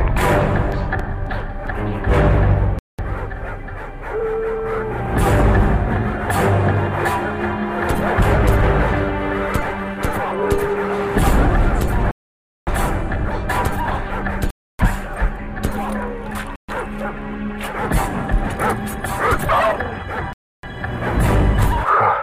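Between 0.72 and 1.67 s, eight short ticks, the longest only a few milliseconds, repeat at a steady rate of about eight a second. These are CD scratch ticks: a blemish on the disc defeats error correction once per revolution, so the player patches or mutes the lost samples each time around.

The audio then drops to silence at 2.79 s (198 ms), 12.11 s (558 ms), 14.50 s (289 ms), 16.56 s (128 ms) and 20.33 s (302 ms), resuming after each gap. Each gap is likely a Bluetooth stall, where interference delayed packets until the headphones' buffer emptied and playback paused.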